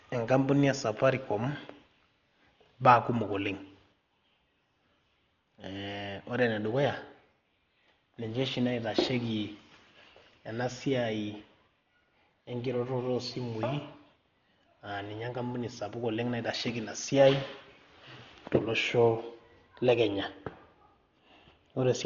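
Dolby Digital compression, likely the cause, runs through the whole speech clip, and heavy damage fits a bitrate around 40 kbps. The encoder discarded everything above 7 kHz and starved many frequency lines of bits, leaving dull, muffled speech with rough, fluttering noise around voiced tones.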